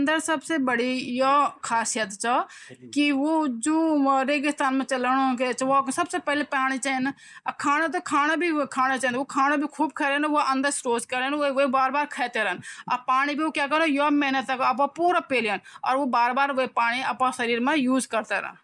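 No technical faults are audible anywhere in the recording.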